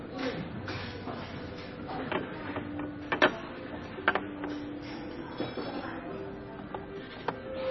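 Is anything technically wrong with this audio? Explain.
Yes. Throughout, the sound shows heavy MP3 compression damage. Nothing is heard above 5.9 kHz. The encoder likely ran short of bits, which fits a bitrate near 24 kbps. It cut the treble and dropped weak frequency lines frame by frame. The result sounds watery and swirly, with smeared attacks.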